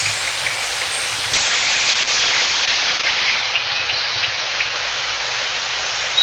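From 1.35 s to the end, the sound turns muffled and rough, with a watery, smeared texture, and it stays at its worst for about 2.1 s. This is a call bitrate drop: the call's bandwidth estimate fell, so the encoder had far fewer bits, which fits a fall from around 32 kbps to 8 kbps. It then coded the audio more coarsely and cut the top end from 20 kHz down to 8 kHz.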